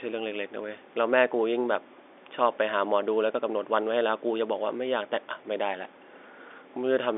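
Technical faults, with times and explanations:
No technical faults; the speech occupies a telephone band of 300 Hz to 3.6 kHz with nothing above 3.8 kHz, as expected of ordinary G.711 telephone coding.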